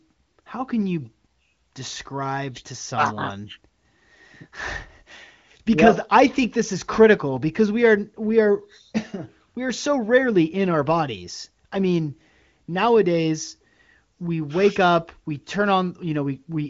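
No technical faults can be heard in the speech, which has its content band-limited to about 7.4 kHz as expected of an AMR wideband (HD Voice) link, and its sound fits one of that codec's higher rates, such as 23.05 kbit/s.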